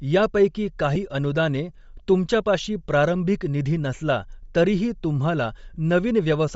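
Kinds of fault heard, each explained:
Bluetooth LC3 compression: likely a low-bitrate LC3 link, around 32 kbps, that strips the upper spectrum and fills it with noise, giving the speech a plainly audible breathy, grainy edge.
Lost LE Audio frames: the decoder filled in missing frames by repeating the previous spectrum with scrambled signs, leaving brief patched-over dropouts at 0.95 s and from 5.74 to 5.76 s.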